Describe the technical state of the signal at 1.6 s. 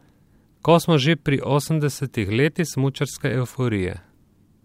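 At 1.6 s the speech carries clock slip clicks, a faint regular ticking that runs from 0.18 s to 4.63 s, about ten per second. Each tick is a single sample dropped or repeated. The likely cause is two devices running on unsynchronised clocks, with a mismatch of around 200 ppm accumulating a whole-sample error roughly every tenth of a second. The ticks are clearest on loud, sustained parts of the speech.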